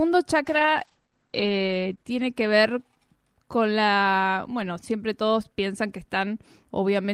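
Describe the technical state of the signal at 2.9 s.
Call bitrate drop, running from 0.44 s to 3.05 s, so 2.9 s falls near its end. The call's bandwidth estimate sagged and the encoder was pushed from 32 kbps down to 10 kbps, holding the lowest rate for about 1.3 s. With so few bits, the speech is coded coarsely and the audio bandwidth narrows from 20 kHz to 8 kHz, leaving the voice muffled and rough until the bitrate climbs back.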